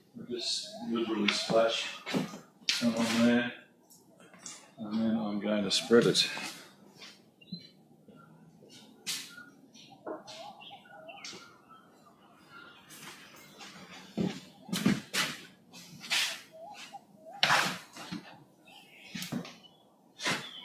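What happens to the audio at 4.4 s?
At 4.4 s the audio sits inside a stretch, from 3.65 to 4.78 s, where the sound is cut by the noise suppressor: it judged the steady, lingering parts to be noise and lowered them by up to about 7 dB, across about seven tenths of a second in total. Sudden onsets still come through, so unlike a dropout the sound thins and sags rather than vanishing.

Behind this, a noise suppressor applied to music or sounds is active across the whole clip, its gain swinging by roughly 10 dB as it treats held tones and decays as noise. The result is pumping and shortened tails, not the even level change a compressor would give.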